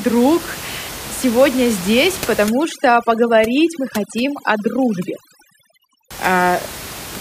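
A speech recording with room noise sitting about 13 dB below the voice shows overdone noise removal from 2.47 s to 6.11 s, starting right after "сегодня здесь". Over that stretch the reduction is set too aggressively: frequency bands close to its noise estimate get pulled down hard or muted entirely, taking low-level voice detail with them. The background drops and breaks up into twinkling specks.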